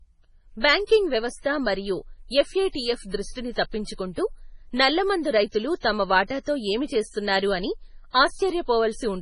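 Speech here, with a watery, swirly texture and nothing above 10.5 kHz, likely heavy MP3 compression at a very low bitrate, around 24 kbps. You'll also catch pre-echo, short hiss smearing ahead of attacks for roughly 30 to 40 ms: at 0.87 to 0.89 s, just before "వ్యవస్థ మరియు"; 2.72 to 2.75 s; 5.80 to 5.83 s, after "దృష్టిని తప్పించుకుంటూ నల్లమందు రైతులు"; and 8.11 to 8.14 s, after "ఏమి చేస్తున్నారు అని".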